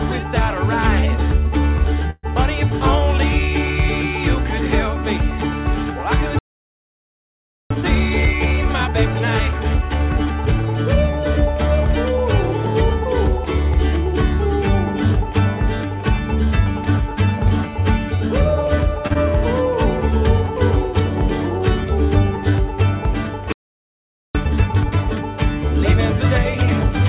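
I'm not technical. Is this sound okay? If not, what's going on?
No, there are several glitches in the sound.

From 2.10 to 2.26 s there is a call audio freeze. The sound turns into a brief fading noise, then carries on where it stopped. Delayed network data is the likely cause.

From 6.39 to 7.70 s there is a playback stall. The sound goes silent for about 1.3 seconds, likely because the player ran out of data. The same thing happens from 23.52 to 24.35 s, for about 0.8 seconds.

After each stall comes a time-compressed catch-up. From 7.70 to 10.69 s the sound plays 1.25 times faster to make up lost time. From 24.35 to 25.17 s it plays twice as fast. The pitch stays normal, but it sounds rushed.

From 16.78 to 17.39 s there is a jitter buffer speed-up. The sound runs about 10% fast at normal pitch while the receiver trims a small fraction of a second of built-up delay.

From 19.07 to 19.13 s and again from 19.13 to 19.18 s there are two short stalls from a late packet. 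In each, the sound is held a moment too long while the missing piece arrives.

The sound is telephone-quality throughout, with nothing above 4 kHz, so it lacks crispness.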